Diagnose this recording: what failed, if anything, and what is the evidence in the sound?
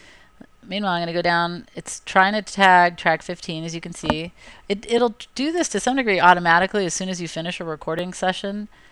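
Overlapping chunks at the buffer stage: a brief stutter-click at 1.98, 4.98 and 7.99 s, spaced 3 s apart. Each new 3-second chunk starts about 7 ms before the previous one ends, so that sliver of sound plays twice at every join.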